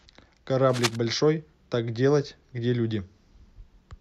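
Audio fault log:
0.69–0.96 s, cable scratch noise: a dense, uneven scratching rustle sits just below the speech level, likely from a worn cable or connector being moved.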